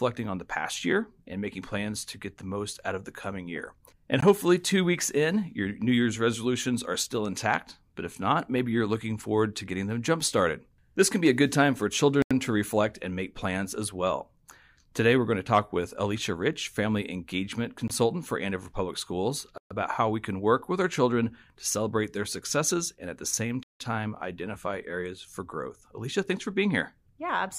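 Abrupt pops at 4.21 and 17.88 s (about 18 ms each) and sharp-edged holes at 12.22–12.31, 19.58–19.71 and 23.63–23.80 s (85, 128 and 171 ms) come from blocks of digital silence. The output buffer likely went unfilled in time, so the speech dropped straight to zeros, which fits 4096- and 8192-sample blocks.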